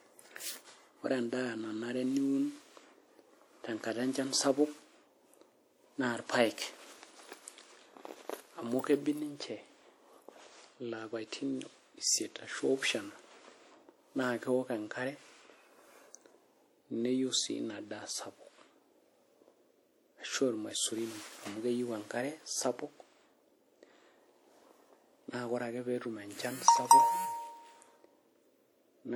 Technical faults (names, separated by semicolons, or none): WMA compression